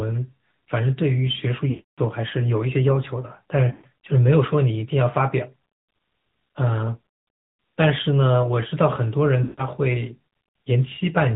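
A speech recording carried over the AMR narrowband mobile codec: nothing passes above 4 kHz, and the voice has a buzzy, synthetic edge that points to a mid-rate mode near 10 kbps. This sets it apart from simple low-pass filtering, which would dull the sound without adding that vocal-tract-model artificiality. Lost AMR speech frames occur at 1.70–2.00 s, 3.72–3.86 s and 9.44–9.65 s. Each time, the decoder stretches the last sound and fades it out instead of cutting to abrupt silence the way plain dropouts would, and the voice returns weak or rough for a moment.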